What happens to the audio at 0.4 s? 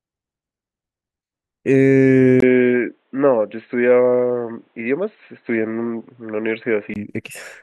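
Nothing goes wrong at 0.4 s; the speech there plays through intact, with no dropout, click or distortion.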